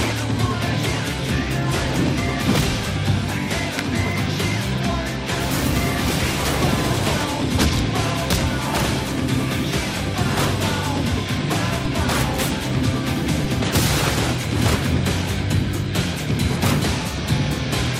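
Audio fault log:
11.85 s and 13.44 s, DC step: at each instant the waveform's zero line jumps by about -16 dBFS and then sinks back as a decay, the curve of roughly a 20 Hz high-pass pulling the offset out. The sudden shift is heard as a low thump or click, and the audio carries on uninterrupted. That separates it from a dropout or a single-sample click, where content is lost or the transient is brief and bright.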